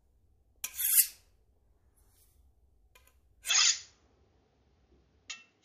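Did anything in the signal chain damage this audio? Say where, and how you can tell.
Yes. At 3.5 s the capture stage likely switched input to a poorer device: everything above 7 kHz vanishes, the level dips by about 5 dB, and faint new noise appears.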